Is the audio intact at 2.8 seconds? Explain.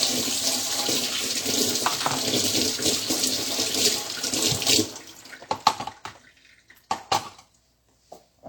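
No. At 2.8 s, as throughout, nothing sounds above 18.5 kHz and layered artefacts overlap, likely from transcoding between lossy codecs, consistent with MP3 followed by low-rate HE-AAC.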